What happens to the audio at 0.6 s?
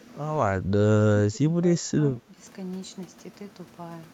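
At 0.6 s the talker's level suddenly sags, dropping by about 10 dB at its deepest for roughly a tenth of a second before recovering at 0.71 s. This is speech suppressed in double talk. The likely cause is an echo canceller that, faced with both sides talking at once, could not tell the near talker apart from the loudspeaker echo and attenuated everything, briefly ducking the wanted voice along with the echo.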